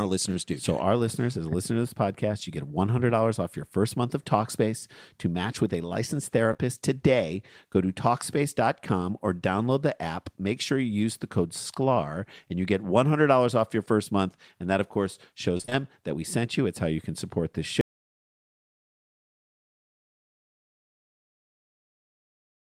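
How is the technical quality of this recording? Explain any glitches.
Three separate faults affect the speech: a brief concealed gap, a short robotic burst, and a cut to dead silence that runs to the end.

At 6.53 to 6.66 s, right after "match with a licensed", there is short concealed packet loss. Two overlapping holes of about 20 ms each were patched by extending the preceding sound, which adds a few milliseconds of stretch. You hear a quick smear, not silence. A single smear like this separates it from the choppy pattern later in the clip.

At 15.57 to 15.73 s comes repeated packet loss, with a robotic sound. Four gaps, the longest about 22 ms, leave half of that span synthesised from the preceding audio. The patches follow one another too quickly to blend back, so the sound turns choppy and broken rather than briefly smeared.

From 17.81 s, just after "you can support this", there is an audio dropout to silence that lasts to the end of the clip. 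The signal stops mid-flow and becomes silence with no room tone. The likely cause is a lost input or link while recording continued. Unlike packet loss, nothing fills this gap.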